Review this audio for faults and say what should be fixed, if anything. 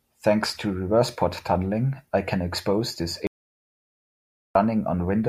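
The input was likely lost while zeros kept being recorded, causing an audio dropout to silence from 3.27 to 4.55 s after "I can expose this", with no room tone. Securing cables and watching input meters during recording would prevent this.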